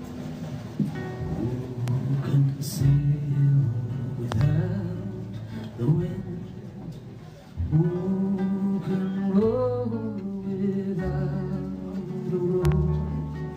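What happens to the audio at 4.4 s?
A loud pop hits between 4.32 and 4.43 s: two sharp pops in quick succession, roughly 15 dB above the surrounding sound, which continues underneath. The likely cause is a sudden voltage pulse, from a plug, switch, static or driver glitch, entering the signal chain.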